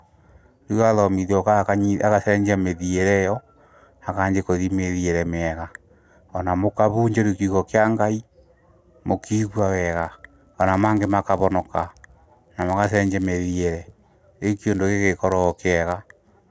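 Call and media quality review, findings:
Resampler restarted on every block, 9.27 s to end. Speech carries a buzz at 100 Hz, absent in pauses. 48 kHz to 16 kHz converter loses filter state at each 10 ms block edge. Spectrogram: vertical striations every 10 ms, 100 Hz comb lines; waveform: small edge discontinuities.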